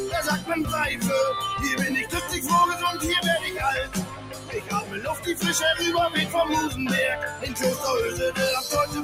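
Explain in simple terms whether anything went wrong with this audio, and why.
A noise suppressor built for voices was left running on this audio. It mistakes steady sound for noise, so levels keep pumping and thinning. There's also sound cut by the noise suppressor from 3.86 to 5.27 s and at 7.24 to 7.56 s, where held or fading sound sinks noticeably while sharper bits slip through.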